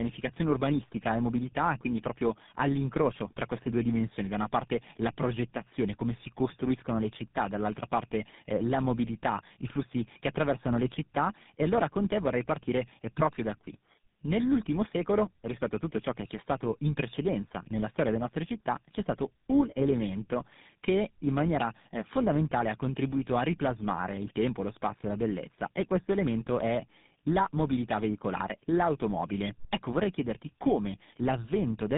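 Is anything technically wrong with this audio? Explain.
Yes, there's tandem speech coding running through the whole clip. This speech has been squeezed through GSM full rate at 13 kbit/s three separate times, with G.711 hops in between. So each GSM stage had to re-code audio the previous one had already mangled, and the losses stacked. You hear it as rough, muffled, warbly speech, worse than a single GSM pass would give, with nothing above about 3.7 kHz.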